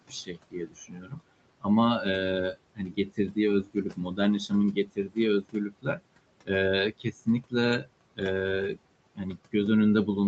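Noise suppressor artifacts run through the whole clip. The suppressor pushes down the bands it judges to be steady room noise by about 22 dB, so the background drops away in the pauses and returns under each phrase. All of this sits within a band that stops at 8 kHz, consistent with the call path.

Speech cut by the noise suppressor occurs in four stretches: 0.09 to 1.2 s, 2.53 to 6.0 s, 6.92 to 8.21 s and 9.15 to 9.54 s. In each, the suppressor mistakes quiet parts of the speech for noise and turns them down with the background, by as much as about 21 dB in the middle two spans. Soft consonants and word tails sound swallowed. The loss is heaviest in the 2.53 to 6.0 s span, about a second in total, and slightest near the end.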